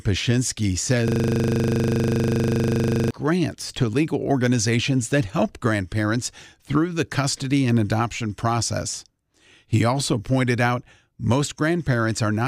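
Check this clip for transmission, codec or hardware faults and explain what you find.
One hardware fault is present. From 1.08 to 3.11 s the speech is replaced by a rough, steady buzz at 25 Hz before it resumes at "grants to legal organizations". This is a system hang loop: while the system froze, the sound hardware kept replaying one 40 ms buffer about fifty times.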